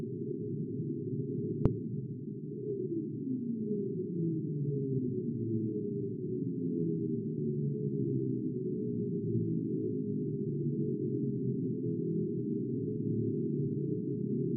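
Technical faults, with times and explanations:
No technical faults can be heard in this recording of sounds. Nothing here calls for a time or an explanation.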